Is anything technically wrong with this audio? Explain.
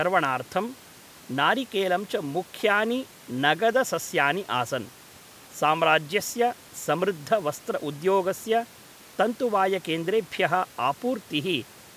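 No, nothing technically wrong can be heard here.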